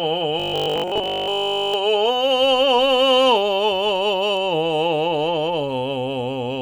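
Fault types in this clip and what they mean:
Robotic sound from repeated short buffers: From 0.40 to 1.74 s the music turns into a rigid, metallic 50 Hz buzz. Nearly all of that stretch is repeats. Audio likely arrives too seldom, so a 20 ms slice loops while real audio is skipped.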